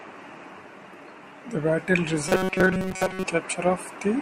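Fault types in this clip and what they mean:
Robotic sound from repeated short buffers: from 2.29 to 3.26 s the speech becomes a rigid, metallic buzz at 188 Hz, likely from a slice of about 5.3 ms replayed through most of that stretch. Unlike a stutter, the repeats fuse into one fixed pitch.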